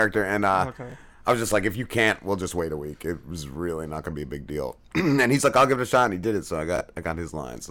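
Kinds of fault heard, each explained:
Hard clipping: The speech is being driven past what some stage in the chain can pass, so the peaks get sliced flat and throw off harsh upper harmonics. You hear it as crackle and fuzz at 0.01–0.05 s, 0.45–0.61 s and 1.29–2.11 s (just before "we'll just wait a"), with overdrive around 3 to 4 dB. It's worst at 5.19–6.05 s, pushed about 7 dB over, where it turns into a proper gritty buzz on the loud syllables.
Chunks out of order: A short block of audio, about 21 ms long, got delivered one slot late and plays after the block that should have followed it. Nothing's missing, but the shuffle leaves three hard joins, so you get a brief jumbled stutter. It happens at 0.90–0.94 s and again at 6.76–6.81 s, right after "did it so I".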